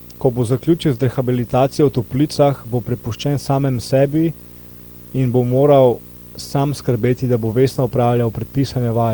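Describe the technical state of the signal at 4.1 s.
Around 4.1 s, a lost packet rebuilt from error correction sits just after "bo prepuščen samemu", from 4.05 to 4.07 s. One packet went missing. The next packet carried a low-bitrate copy of it, and the decoder played that copy in its place. So there is no gap. The 20 ms stretch sounds briefly rougher and noisier.

Under this moment, and through the whole clip, runs video or display buzz. A screen or video cable is coupling into the audio. It gives a buzz at 59.94 Hz, the picture's field rate, with hash above it. It sits roughly 20 dB below the speech. A thin, very high tone at 15.7 kHz also comes through. That is the line rate of the video signal leaking in.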